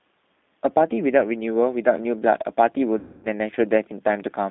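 Speech passed through a G.729 codec, most likely the G.729A variant at 8 kbit/s, where the decoder rebuilds each 10 ms frame from a vocal tract filter, a pitch predictor and a few coded pulses rather than the actual waveform. The line carries only about 200 Hz to 3.6 kHz, so the sound is thin and muffled, and the codec damage is plainly audible as a rough, slightly synthetic texture across the whole clip. From 2.99 to 3.27 s there is VoIP packet loss concealed by the speech codec. Roughly 240 ms of audio never arrived, which fits about a dozen 20 ms packets. With no new data, the decoder kept extrapolating from its last pitch and filter settings while lowering the gain each frame. The result is a stretched, buzzy tone or coloured noise that fades through the gap. Because each frame builds on the one before, the sound stays weak or distorted for tens of milliseconds or more after packets resume at 3.27 s.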